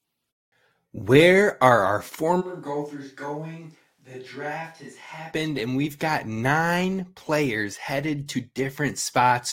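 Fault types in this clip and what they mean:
Switch to a distant microphone: after "are our" at 2.43 s the speech suddenly turns roomy and hollow, thinner in the bass, about 10 dB quieter, with more room noise; the close microphone likely dropped out. It snaps back at 5.30 s, before "and we've got nine".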